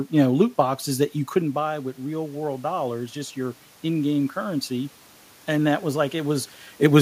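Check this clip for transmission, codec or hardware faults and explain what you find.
One fault is present, automatic gain rising from 0.93 to 4.99 s. With the talker moving away around 1.5 s and the input dropping about 10 dB, the AGC slowly adds about 4 dB, lifting voice and room noise together.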